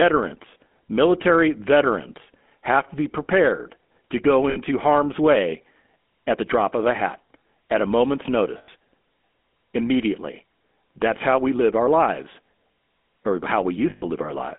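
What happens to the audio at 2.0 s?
At 2.0 s the speech is passing through the GSM full-rate codec, as it does for the whole clip. The coder rebuilds the voice from a vocal-tract model fed by a sparse, regularly spaced pulse excitation, at a rate that fits 13 kbps, and the line keeps only about 200 Hz to 3.5 kHz. The result is a plainly audible buzzy, gravelly roughness on the voice, with the top end missing and a thin, telephone-like tone.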